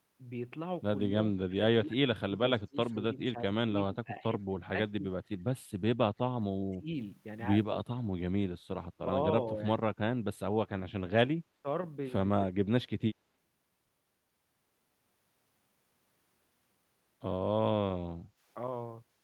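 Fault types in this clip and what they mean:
Speech suppressed in double talk, at 1.03 to 2.31 s, 2.67 to 5.05 s, 6.72 to 6.9 s, 9.52 to 9.6 s, 11.43 to 11.66 s and 12.55 to 13.03 s: the speech dips in level in pieces, by roughly 30 dB at the deepest points near 1 s and 12.5 s, while the short dip near 9.5 s is slight. The likely cause is an echo canceller that, with both ends talking, could not separate this talker from the loudspeaker echo and turned both down.
Background gated by the echo canceller, at 18.25 to 18.4 s: the room sound drops by about 9 dB for around 150 ms, then returns. While the loudspeaker was playing, the canceller pulled the microphone down hard to keep echo out, and the background went with it. The result is a brief hole in the ambience that fills back in as soon as the canceller releases its hold on the microphone.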